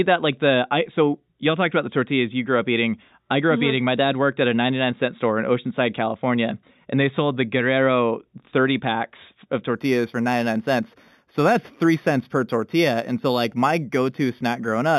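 Imaging from linear upsampling begins at 9.76 s, right after "packs of", and runs to the end at 14.99 s. The speech was raised to a higher rate, which fits a move from 8 kHz to 48 kHz, by joining samples with straight lines. That weak filtering dulls the top of the band and leaves a mirrored copy between 4 and 8 kHz, about 25 dB down, heard as a faint metallic shimmer on sibilants.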